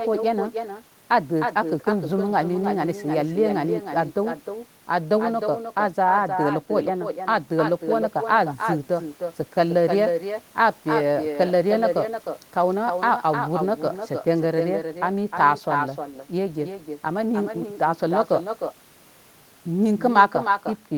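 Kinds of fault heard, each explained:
Echo with no canceller, throughout: the far end's loudspeaker feeds the talker's speech back into its own microphone, and nothing subtracts it, so every phrase returns roughly a third of a second later as a thinner copy about 6 dB quieter.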